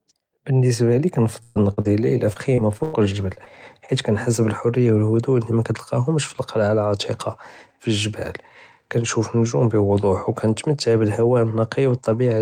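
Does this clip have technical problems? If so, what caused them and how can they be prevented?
Yes. At 1.43–1.58 s the sound smears into a held, fading sound: a burst of packet loss dropped about 120 ms, which the receiver covered by extending and fading the last sound. A larger jitter buffer or forward error correction would prevent it.

Brief smears or wobbles at 1.74–1.79 s, 1.81–1.87 s, 3.35–3.39 s and 3.45–3.48 s are short concealed packet loss, with 20–40 ms gaps patched from the preceding sound. Redundant packets or a steadier network path would prevent them.

From 2.33 to 2.95 s the sound turns choppy and robotic. This is repeated packet loss: four gaps, the longest about 100 ms, covering roughly a quarter of that stretch. Reducing congestion, prioritising voice traffic and using adaptive buffering would prevent it.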